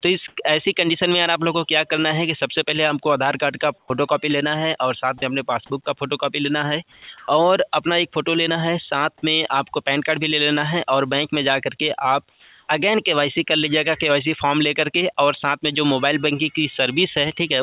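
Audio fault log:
0.28–0.36 s and 12.3–12.68 s, comfort noise in place of the background: the real background, about 53 dB and 36 dB below the loud passages, is swapped for steady, featureless noise for 80 ms and then 380 ms. The first patch jumps about 19 dB above the surrounding floor, and the second sits about 2 dB below it. The likely cause is discontinuous transmission, with the receiver synthesising shaped noise while the sender is silent.
3.78–3.9 s, 5.18–5.22 s, 5.84–5.86 s, 6.92–7.08 s and 7.18–7.28 s, sound dropped by the voice detector: wanted sound gives way to flat synthetic noise, with 70, 40, 10, 160 and 40 ms of actual audio lost inside replacements of 120, 40, 20, 160 and 100 ms. The likely cause is the sender's detector misjudging low-level sound as background and halting transmission, so the receiver plays comfort noise until the detector triggers again. This is heard over the band-limited call path, which has nothing above 4 kHz.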